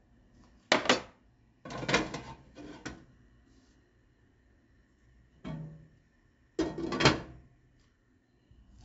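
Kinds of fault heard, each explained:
4-bit ADPCM compression, throughout: each sample is coded as a coarse 4-bit step away from a predicted value, with the step size adapting as the signal moves. Here the coding damage is heavy. A gritty hiss rides on every loud passage and rises and falls with the level, and sharp onsets smear where the step cannot grow quickly enough. Nothing sounds above 7.7 kHz, which fits a rate of about 16 kHz and a 64 kbps stream, so the audio is also dulled.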